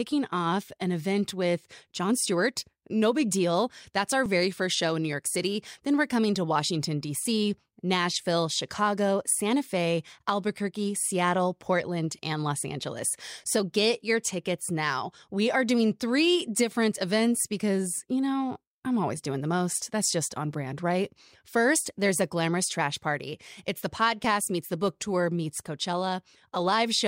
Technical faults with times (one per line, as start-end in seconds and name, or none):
4.26 audio missing between chunks
14.25 audio missing between chunks
24.24 audio missing between chunks